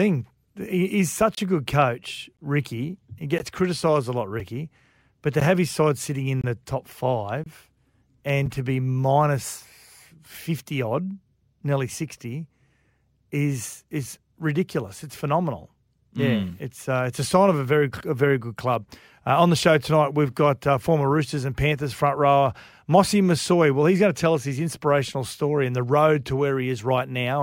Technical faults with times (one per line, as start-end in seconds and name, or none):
1.35-1.37 gap between stream segments
2.37 gap between stream segments
3.38 gap between stream segments
4.40 gap between stream segments
5.40 gap between stream segments
6.41-6.44 gap between stream segments
7.44-7.46 gap between stream segments
8.46 gap between stream segments